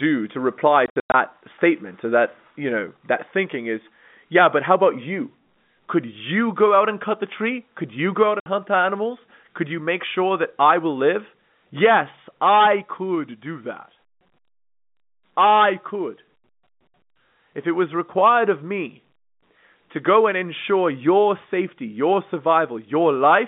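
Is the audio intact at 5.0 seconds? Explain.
Yes, at 5.0 seconds the speech is intact, carried over a normally working G.711 telephone path that keeps it within the narrow line band of about 150 Hz to 3.6 kHz.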